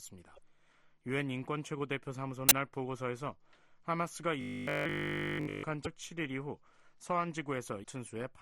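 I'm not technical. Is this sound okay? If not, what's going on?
No. Robotic sound from repeated short buffers, 4.41 to 5.63 s: a rigid 50 Hz buzz, likely one tiny 20 ms slice replayed nonstop while new sound failed to arrive.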